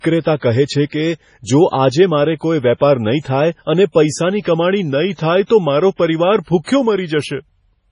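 Speech that sounds watery and swirly throughout, with s sounds turning metallic and chirpy, consonant attacks smeared, and a hard ceiling with nothing above 10.5 kHz. This is heavy MP3 compression, likely from an encoder starved of bits, which fits a very low bitrate around 24 kbps. It chops off the treble at a fixed point and drops weaker frequency components that flicker in and out between frames, producing the shifting, underwater texture. At 5.46 to 5.50 s a short hiss creeps in just ahead of a sharp onset, and the attack itself lands soft rather than crisp. That is pre-echo: the codec spreads its quantisation noise across the whole transform block, so noise sized for the loud onset also fills the quiet stretch before it, here smearing about 41 ms ahead of the attack.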